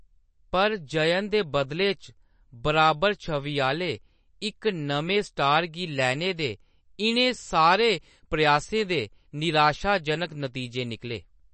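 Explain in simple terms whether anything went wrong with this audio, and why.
Something did go wrong, and it lasts the whole clip. The speech sounds dull and plainly watery, as if heard through a thin layer of water. Nothing is left above about 8.3 kHz, so the crisp top of the sound is gone. The likely cause is MP3 compression squeezed too hard. With too little room, the encoder threw away the treble and dropped faint details, which flicker in and out and leave that swirly texture.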